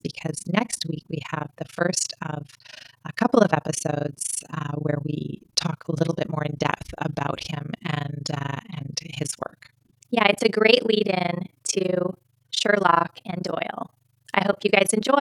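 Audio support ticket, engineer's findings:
Overlap-add ripple across the whole speech clip. Level pumps at around 30 Hz, dipping about 60 dB each cycle. Heard as a rough tremolo. Probable component: frame-based resynthesis stage. Window overlap does not sum to constant gain.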